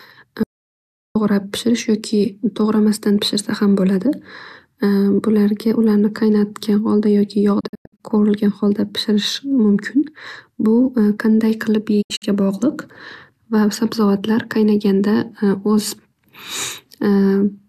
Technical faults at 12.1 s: digital broadcast dropout

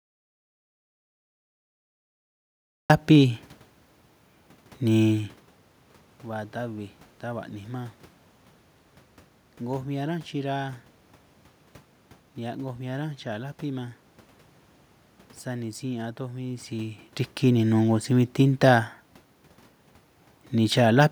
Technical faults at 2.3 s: audio dropout to silence

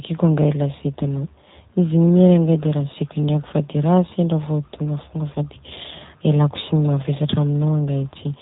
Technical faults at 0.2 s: G.729 codec

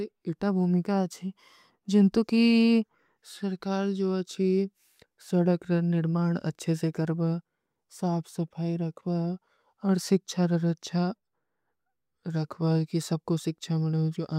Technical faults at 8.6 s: none

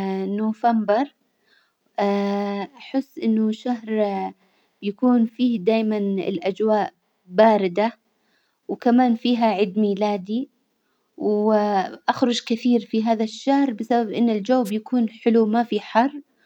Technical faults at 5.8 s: none

